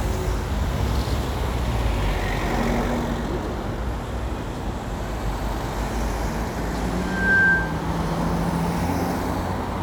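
A recording of everyday sounds, with a loudspeaker feedback squeal from 7.00 to 7.83 s. A single tone at 1.6 kHz swells over roughly a third of a second until it sits around 10 dB above the rest of the sound, then stops. The microphone is picking up the loudspeaker it feeds, and at 1.6 kHz the loop gain exceeds unity, so that frequency keeps reinforcing itself until the loop is broken.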